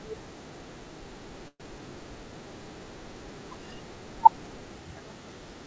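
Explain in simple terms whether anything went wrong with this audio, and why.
At 1.48 s the speech stalls for about 0.14 s. The last sound is stretched into a short buzz that fades to a brief silence, then the speech resumes where it stopped. This is a call audio freeze, likely caused by late-arriving packets, so nothing is lost, only delayed.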